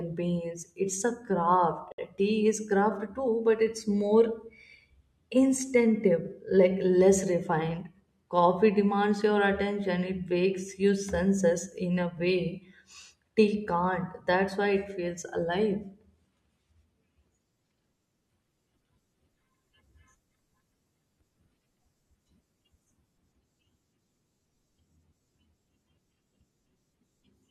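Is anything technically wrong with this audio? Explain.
Yes. Separately encoded pieces were joined untrimmed at 1.92 s, leaving encoder delay and padding in place: a 63 ms silence with smeared edges interrupts the speech, which then resumes where it stopped.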